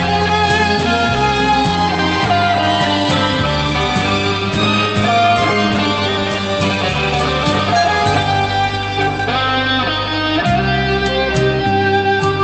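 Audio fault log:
Nothing wrong turns up here; the audio comes over an Opus call link at 32 kbps with the top end stopping around 8 kHz, just as that link is meant to.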